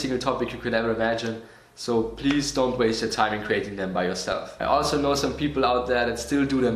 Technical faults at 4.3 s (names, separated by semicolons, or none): MP2 compression; DAB burbling